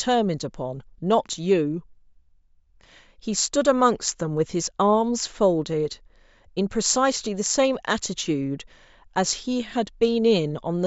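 Nothing technically wrong turns up anywhere in this short bit of speech, so there's no fault to time or trace back to a cause.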